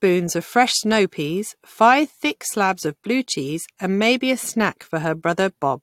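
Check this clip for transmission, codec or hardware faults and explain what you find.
No transmission, codec or hardware faults.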